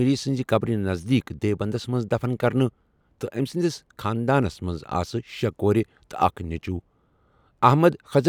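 No technical faults can be heard anywhere in this recording.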